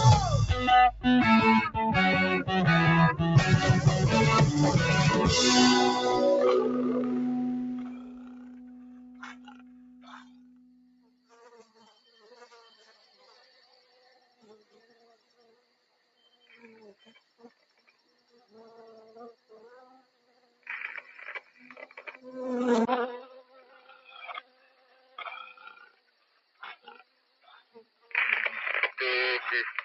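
A noise suppressor built for speech is applied to this sound for its whole length. It treats sustained or decaying material as noise and pulls it down, so the level swings by about 20 dB between what it lets through and what it sinks. The result pumps and thins, with onsets intact and the body behind them hollowed out. Unlike a level change at the source, these swings follow the sound's own shape rather than happening at one moment.

The individual cuts by the noise suppressor fall at 7.52 to 11.32 s (deepest about 14 dB), 11.64 to 11.83 s (about 9 dB), 13.81 to 16.56 s, 16.95 to 18.53 s, 19.33 to 20.67 s (each about 13 dB), 21.41 to 22.01 s (about 10 dB), 23.41 to 25.18 s and 25.53 to 28.13 s (both about 13 dB). In each, held or fading sound sinks and tails are clipped short while sharp attacks survive, which separates it from a simple fade or dropout.

At 22.85 s there is a 20 ms gap, and from then to the end the sound is duller and slightly quieter, down about 5 dB. 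A new, faint noise floor sits about 45 dB below the signal. This is likely the input switching to a poorer device. Unlike the suppressor's cuts, the change happens once, abruptly, and persists.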